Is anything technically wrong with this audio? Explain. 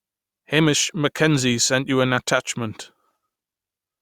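No, nothing in this recording stood out as a technical problem on listening.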